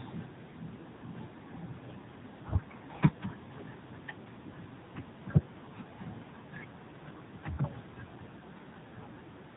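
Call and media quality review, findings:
Speech passed through AMR narrowband mobile codec throughout, damage plainly audible; coding rate sounds near 8 kbps. Buzzy, synthetic voicing from few-pulse excitation in 20 ms frames. Spectrogram: hard ceiling at 4 kHz, nothing above; smeared, blocky harmonics.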